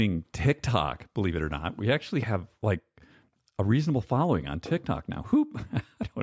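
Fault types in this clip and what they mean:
No faults detected in the speech audio; nothing to list.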